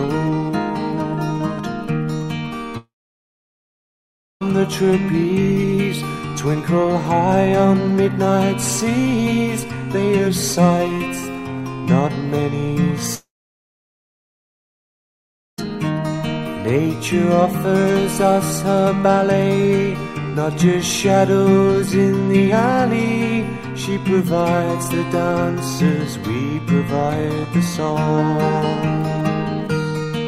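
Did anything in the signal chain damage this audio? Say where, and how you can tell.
Yes: a long network dropout, twice, at 2.77 to 4.43 s and 13.15 to 15.71 s. Each gap opens with a brief fading buzz or hiss, falls silent for about 1.5 s and 2.3 s, then resumes with audio skipped, likely from packets lost in transit.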